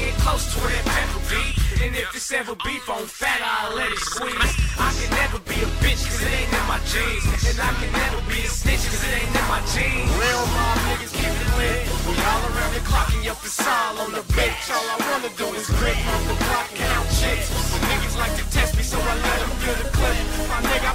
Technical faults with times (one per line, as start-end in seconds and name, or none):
12.05 repeated buffer
15.94 repeated buffer